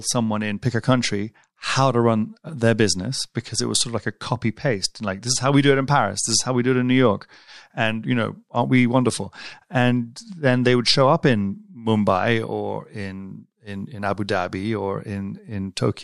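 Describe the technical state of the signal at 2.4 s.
At 2.4 s the speech signal is intact, with no audible technical fault at that point.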